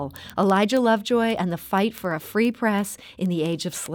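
From 0.16 s to the end, word clock ticks run through the speech: about every 0.07 s, some fifty in all, an unlocked receiver whose clock is off by roughly 300 ppm slips and drops or repeats one sample. The steady rhythm sets them apart from random clicks.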